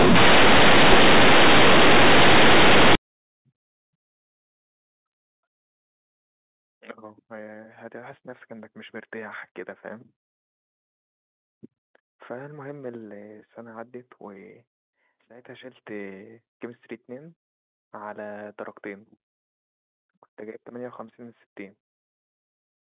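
For the first 2.95 seconds of this speech recording, the sound is harsh, loud and buzzy. Quiet passages are blown up to the same level as loud ones and pauses fill with heavy noise. The cause is companded audio read as linear: the mu-law bytes are played as plain 8-bit samples without expansion, so each sign change throws the waveform across about half its range. After that point the telephone-band G.711 sound, capped at 4 kHz, is heard as intended.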